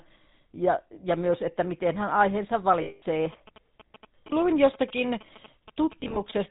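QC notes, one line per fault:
Throughout: GSM full-rate codec. Everything is cut off above 4 kHz and has that buzzy, gravelly edge. The vocal tract is modelled and driven by sparse, regularly spaced pulses, which fits the 13 kbps full-rate codec. The damage is plainly audible.
2.82–3.03 s: lost GSM frames. Right after "että miten hän aiheensa", about 200 ms drops out. The last good frame is repeated, so you hear a rough, metallic ring rather than a clean gap. That's roughly ten 20 ms frames.
3.33–6.32 s: GSM signalling bursts. A nearby 2G phone is signalling, and the audio circuit rectifies its radio bursts. The result is a galloping dit-dit-dit of short buzzes at 217 Hz, sitting around 20 dB below the speech.
6.00–6.18 s: lost GSM frames. This time about 80 ms is lost, scattered over 160 ms in very short runs of roughly a frame each. Each gap is patched by repeating the previous frame, so the sound turns briefly metallic and choppy instead of cutting out.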